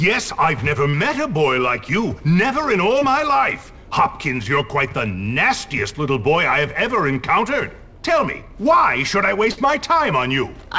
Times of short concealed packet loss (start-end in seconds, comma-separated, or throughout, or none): 0.90-0.95, 2.99-3.03